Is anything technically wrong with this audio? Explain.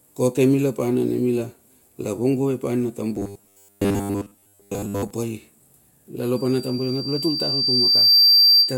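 Yes, there are two faults.

From 3.16 to 5.11 s the speech turns into robotic sound from repeated short buffers, a rigid, metallic 100 Hz buzz. The likely cause is audio arriving too seldom, so roughly 70 percent is filled by replaying 10 ms chunks. A spectrogram shows evenly spaced 100 Hz harmonics replacing the natural pitch contour.

From 6.36 s to the end at 8.77 s, a loudspeaker feedback squeal builds. The microphone picks up its own loudspeaker, and at 4.7 kHz the loop gain exceeds one. The tone swells over about 2 s to about 10 dB above the speech, a single bright horizontal line on a spectrogram.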